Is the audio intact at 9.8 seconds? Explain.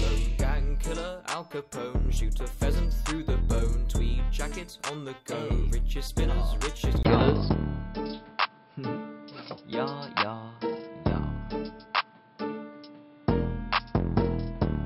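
No. From 7.03 s to the end, the audio sounds like the input was likely switched to a poorer device. A 20 ms silence at 7.03 s is followed by sound that is duller and boxier, with nothing above 5.4 kHz, and a new background noise about 35 dB below the signal. The level stays about the same. A simple low-pass filter or a codec narrowing its bandwidth would not add that gap or a different noise floor.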